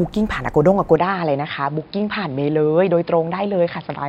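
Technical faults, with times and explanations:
0.96 s to the end, input switched to a poorer device: the speech abruptly loses everything above 5.2 kHz and turns duller and quieter, roughly 5 dB down, with a new faint noise floor and no gap. This is likely a switch to a narrower-band microphone.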